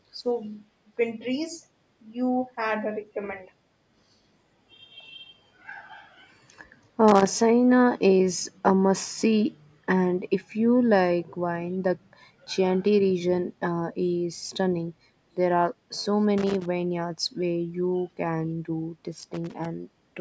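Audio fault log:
0.13–0.26 s and 0.96–3.16 s, speech suppressed in double talk: the speech sags by roughly 5 dB in short patches, a few tens of milliseconds in the first stretch and around a third of a second spread through the second. The likely cause is talk arriving from the far end at the same moment. The echo canceller, unable to tell the local talker from loudspeaker echo, pulled the whole microphone signal down instead of only the echo.
4.0–4.81 s, 17.73–18.18 s and 19.82–19.94 s, background gated by the echo canceller: the room tone ducks by about 14 dB, about 16 dB and about 10 dB. The dips last most of a second, under half a second and about a tenth of a second. While the loudspeaker was active, the canceller clamped the microphone hard to keep echo out, taking the ambient floor with it. The background swells back once the canceller releases.
7.08–7.36 s, 16.38–16.66 s and 19.2–19.66 s, loose connector crackle: each is an irregular burst of scratchy crackle lasting roughly a quarter to half a second. 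A worn or dirty contact is rapidly making and breaking as it shifts, chopping the signal into fragments, and any DC on the line turns each reconnection into a pop. Together these give the ragged, gritty texture rather than a clean dropout. The call's microphone filtering, with nothing above 8 kHz, sits underneath all of this.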